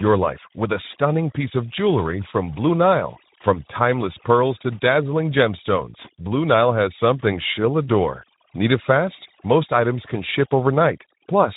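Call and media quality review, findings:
Overdone noise removal, whole clip, 0 to 11.6 s. Background drops away and breaks into twinkling, warbling specks. Quiet parts of the speech go with it. Probable component: noise suppressor set too aggressive. Mechanism: bins near its noise estimate get cut far down or to nothing, frame by frame. Low-level speech detail sits near that estimate, so it gets gated too. The bins switch on and off independently, which produces the specks.

Speex codec damage, plainly audible, whole clip. Speech sounds noisy and hoarse. Nothing above 3.8 kHz, so the band is narrowband only. Probable component: Speex encoder at a low setting, which fits a bitrate near 11 kbps. Mechanism: CELP coding with too few bits for the excitation signal. The pulse and residual detail is coarsely approximated, so noise and roughness replace the natural voicing texture.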